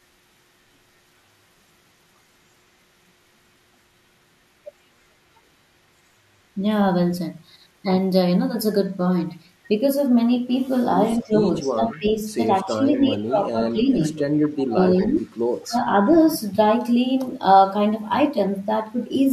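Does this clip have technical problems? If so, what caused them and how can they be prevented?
Yes. Speech suppressed in double talk: with both sides likely talking at once, the echo canceller mistook this talker for loudspeaker echo and turned the speech down by about 15 to 25 dB at 11.16–12.20, 12.64–13.99, 14.65–15.29 and 15.60–15.76 s. Using headsets or a canceller with better double-talk detection prevents this.

Echo leak: the far end's echo canceller likely let loudspeaker sound back into its microphone, returning faint copies of the speech 233 ms late, about 20 to 35 dB down, at 11.91–12.08, 12.96–13.00, 14.18–14.64 and 15.63–15.68 s. Lowering loudspeaker volume or using a headset at that end prevents this.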